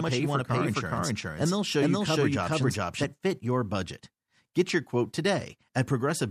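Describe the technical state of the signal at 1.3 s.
At 1.3 s the signal carries a doubled audio track, most likely because the same speech is being picked up a second time through a slower path or an edit has left two copies out of step. The fault is already under way when the clip opens and runs to 3.04 s. A second full-band copy trails the original by roughly 400 ms at about the same level, with no decay or room colour, so each phrase is heard twice.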